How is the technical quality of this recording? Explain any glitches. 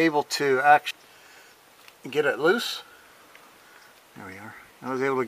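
One glitch stands out. At 0.91 s, compressed frames are skipped: about ten frames of roughly 93 ms each are not played, so around 0.7 s of audio vanishes. The sound jumps forward abruptly at the join.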